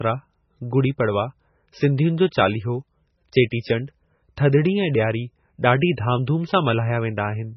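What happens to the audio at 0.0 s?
From 0.0 s onward the speech sounds dull and muffled, with nothing above about 5.9 kHz, plus the watery, smeared texture of heavy lossy coding. This is likely low-bitrate audio saved at a high bitrate: the sound fits an MP3 at around 16 kbit/s that was later re-encoded as MP3 at around 192 kbit/s. The larger second encoding cannot restore the highs and detail the first one stripped out, so that damage runs through the whole clip.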